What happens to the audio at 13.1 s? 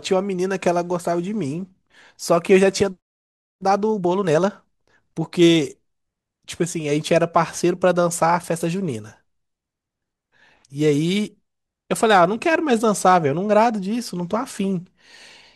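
Hard clipping occurs from 13.06 to 13.16 s. Peaks exceed the converter's range by about 2 dB and are cut flat. That adds high harmonics, heard as brief crackle.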